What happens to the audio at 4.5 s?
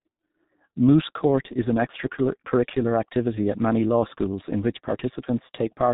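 At 4.5 s you're hearing the same G.723.1 codec damage that runs through the whole clip, not a separate event. The speech has been squeezed into long frames at a very low rate, consistent with roughly 6 kbit/s, and nothing gets through above 3.8 kHz. The model of the voice updates slowly, so consonants smear together and the speech sounds muffled and hoarse, as if heard over an old internet phone call.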